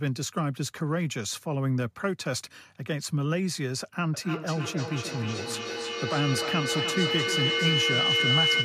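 From 4.14 s to the end of the speech clip at 8.65 s, a feedback howl builds. The microphone picks up its own loudspeaker output, and each trip round the loop comes back louder. The repeats pile up, narrowing to a shrill tone around 3 kHz that pulses about every third of a second and peaks near 2 dB above the speech. On a spectrogram a bright horizontal line near 3 kHz thickens over time. The waveform's envelope swells in rhythmic bulges.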